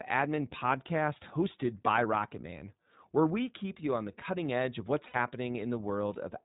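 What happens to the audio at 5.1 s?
Lost iLBC frames cause a short dropout between 5.08 and 5.16 s. About 60 ms of packets never reached the decoder, which fits three consecutive 20 ms frames. To fill the hole, the decoder repeated the last pitch cycle it had and blended it with noise. The result is a brief held, slightly buzzy, breathy vowel-like tone in place of the real speech. Since each iLBC frame decodes independently, the speech snaps back almost immediately after 5.16 s.

That moment also carries the iLBC codec damage present throughout the clip. The band stops at 4 kHz, and each frame's excitation is coded on its own, in a way that fits the 15.2 kbps, 20 ms mode. The speech around the dropout therefore sounds dull, slightly rough and synthetic, and the codec damage is plainly audible.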